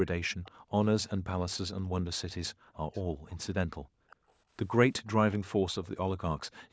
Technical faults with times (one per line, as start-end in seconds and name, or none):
0.43-0.51 echo leak
0.52-0.73 background gated by the echo canceller
1.82-1.92 background gated by the echo canceller
2.55-4.29 background gated by the echo canceller
2.93-3.38 echo leak
4.10-4.32 echo leak
4.97-5.87 echo leak